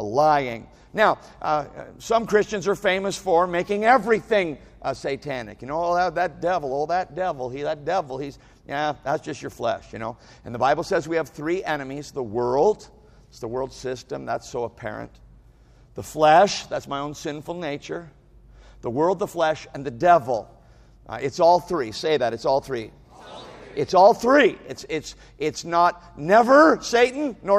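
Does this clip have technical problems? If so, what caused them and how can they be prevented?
Yes. Clock slip clicks run from 0.16 s to 27.53 s as faint ticks about every third of a second, around a hundred in all. Two unsynchronised device clocks, likely drifting apart by roughly 70 parts per million, force one sample to be dropped or repeated whenever the gap reaches a whole sample. Locking all devices to a single shared clock prevents it.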